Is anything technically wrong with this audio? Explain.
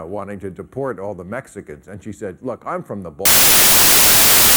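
Yes. From 3.25 s to the end, the sound is swamped by loud, harsh broadband noise. This is samples built from the wrong bytes: the reader assembles each sample's bytes incorrectly, whether shifted by one byte, in swapped order or with the wrong alignment. The rapidly fluctuating low-order bits then land in the most significant position, turning small detail into large random values.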